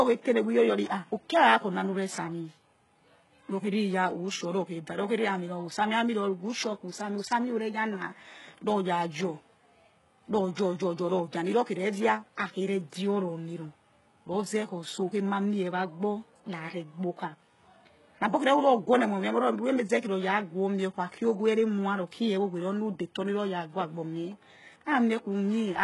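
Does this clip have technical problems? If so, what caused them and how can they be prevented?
Yes. Throughout the speech there's heavy damage that likely comes from HE-AAC compression at a very low bitrate, around 12 kbps. Nothing sits above 11.5 kHz, and the rebuilt treble is copied up from lower bands, so s sounds come out gritty and lispy. To prevent it, give the encoder a higher bitrate or use plain AAC or Opus at a sensible rate.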